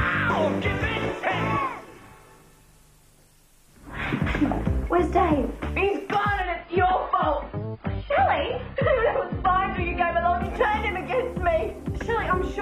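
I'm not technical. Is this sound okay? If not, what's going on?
No. An adaptive stream at a lower bitrate runs from about 6.42 to 10.42 seconds: the connection slowed, so the player briefly switched to a lower-quality version. The sound turns abruptly dull, losing everything above 5 kHz, with no gap, then recovers.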